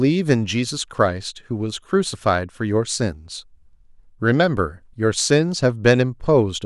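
No technical faults can be heard anywhere in the speech signal.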